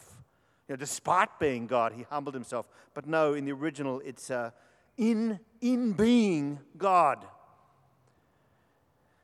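No technical faults can be heard anywhere in the recording. There is nothing in the speech audio that calls for comment on technical grounds.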